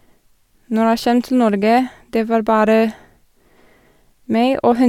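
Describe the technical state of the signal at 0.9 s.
At 0.9 s the speech signal is intact, with no audible fault at that point.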